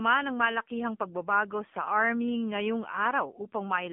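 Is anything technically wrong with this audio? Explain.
Yes. AMR narrowband mobile codec damage runs throughout. The speech is squeezed into a 150 Hz to 3.5 kHz band with nothing above 3.6 kHz, and its buzzy, synthetic texture fits a low rate around 7.4 kbps.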